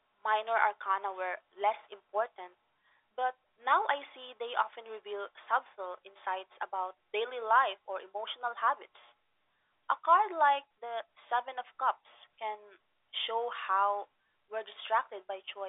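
No technical faults are audible.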